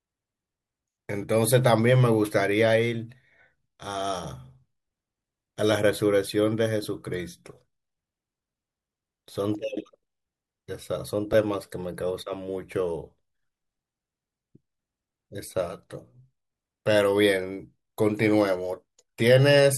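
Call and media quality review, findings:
Lost LE Audio frames at 6.84 s and 11.33 s. Each is a single 10 ms dropout, heard as a brief rough, noisy blip in the speech. Component: Bluetooth LE Audio link, LC3 decoder concealment. Mechanism: one frame missing, so the decoder refills the gap from the previous frame's spectrum with randomised signs. The tonal detail smears into noise for that 10 ms. Gaps are too short for any audible fade.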